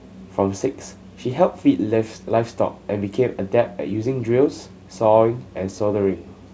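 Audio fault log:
Nothing stood out on listening to this speech recording, which is carried through G.722 wideband telephone coding at 64 kbit/s.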